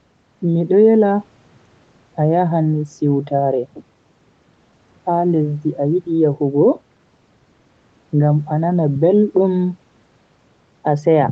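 No technical faults can be heard in this speech recording. The sound carries the ordinary character of a call path, with nothing above about 8 kHz, which fits a wideband Opus call.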